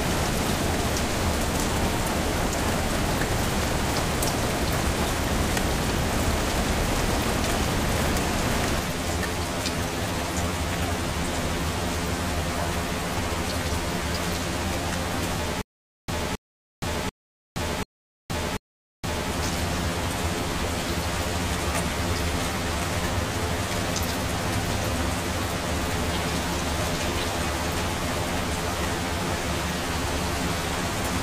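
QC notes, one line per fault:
8.79 to 31.22 s, channel delay (comb filtering): one channel runs around 10 ms behind the other, and the mono sum cancels their shared content at evenly spaced frequencies. The first notch sits near 40 Hz, giving a hollow, phasey colour until the end.
15.62 to 19.31 s, stutter with silent gaps: a 269 ms burst repeats five times, each followed by 469 ms of digital silence, a 738 ms cycle. The likely cause is a stalling stream replaying its last fragment, so the intervening sound is lost.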